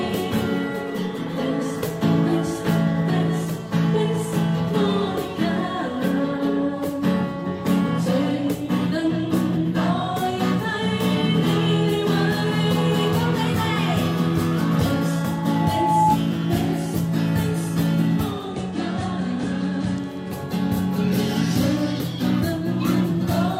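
At 15.17 s a loudspeaker feedback squeal begins. A microphone is hearing the loudspeaker it feeds, and at 858 Hz the loop gain passes one, so that frequency reinforces itself on every pass. Over about a second it swells into a steady whistle until it stops at 16.19 s, ending a few dB louder than the sound around it. On a spectrogram it is a single horizontal line at 858 Hz that brightens from left to right. In the waveform the envelope fans out as the tone grows.

From 18.15 s to 20.41 s the audio shows digital radio blending to analogue. The receiver lost its digital stream and cross-faded, over 463 ms, to the FM broadcast of the same station, then returned. During the FM stretch the level drops by about 4 dB, and a bed of hiss sits roughly 35 dB beneath the sound. On a spectrogram a faint speckled noise floor fills the gaps. In the waveform the amplitude steps down slightly for that span.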